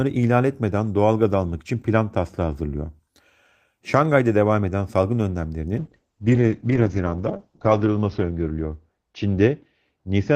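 From 5.78 s to the end at 10.35 s, the speech suffers a call bitrate drop. The encoder's budget falls from 32 kbps to 8 kbps, and audio bandwidth shrinks from 20 kHz to 8 kHz. It sits at the lowest rate for 1.64 s. The sound turns muffled and coarse, with watery smearing, yet it stays continuous. Unlike packet loss there are no gaps or clicks, and unlike a plain low-pass filter the texture itself degrades.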